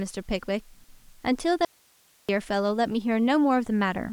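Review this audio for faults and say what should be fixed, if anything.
An audio dropout to a faint residue runs from 1.65 to 2.29 s, about 0.64 s. The speech cuts out abruptly and only hiss remains, roughly 35 dB down. The source was likely lost upstream while the later path stayed live. Secure connections and monitor upstream links.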